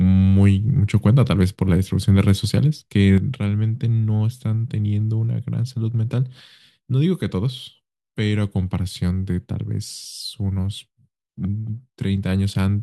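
At 3.18 s the speech falls abruptly by about 6 dB and stays there until the end of the clip. The likely cause is one channel dropping out: with a stereo signal summed to mono, losing one side halves the shared content, and anything unique to the lost channel vanishes. A plain gain change would scale everything evenly. Here the step is exactly 6 dB, instant and permanent, with no fade or recovery.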